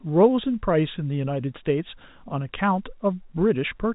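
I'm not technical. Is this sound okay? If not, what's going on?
Yes, it's fine: what you're hearing is ordinary landline telephone sound, which keeps nothing above about 3.8 kHz and so has that familiar slightly narrow phone quality, but nothing has gone wrong with it.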